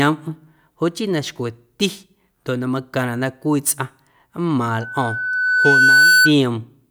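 Loudspeaker feedback squeal runs from 4.81 to 6.32 s. The microphone picks up its own loudspeaker, and at 1.5 kHz the loop gain exceeds one, so that single tone feeds on itself, swelling over about a second and a half to around 10 dB above the speech.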